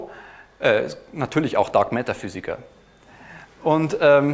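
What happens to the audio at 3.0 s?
Nothing goes wrong at 3.0 s: the audio runs on intact through that point with no dropout, click or other fault.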